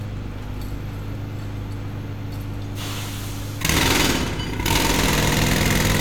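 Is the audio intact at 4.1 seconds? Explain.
Yes, the audio is intact at 4.1 seconds, with no dropout, click, distortion or other fault at that moment.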